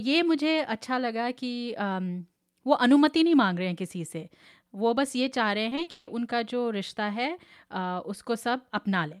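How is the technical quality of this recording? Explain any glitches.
There is one glitch in this speech. From 5.69 to 6.09 s there is repeated packet loss, giving a robotic sound. Audio kept arriving late or not at all. Each hole was patched by stretching the previous sound, and the longest hole was 160 ms. About 60% of that stretch is filler, so the speech turns choppy there, with pieces missing.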